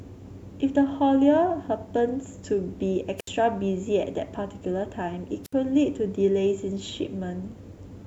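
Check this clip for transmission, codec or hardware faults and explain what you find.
Two wireless microphone squelch dropouts interrupt the speech, at 3.18 to 3.29 s and 5.44 to 5.53 s. Each time the radio link fades, so hiss briefly rises before the receiver's squelch mutes the output for 69 ms and then 63 ms. On a waveform these show as flat gaps. A spectrogram shows a short broadband noise smear, then an empty band.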